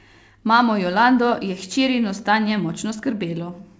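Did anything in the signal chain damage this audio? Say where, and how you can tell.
No, nothing in the chain has damaged this speech; it simply came through a call path whose codec leaves nothing above 8 kHz, which is the band limit you'd expect from G.722.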